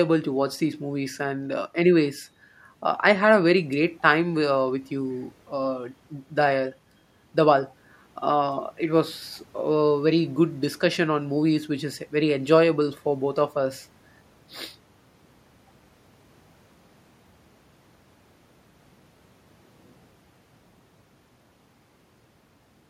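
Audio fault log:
No fault can be heard in this speech clip.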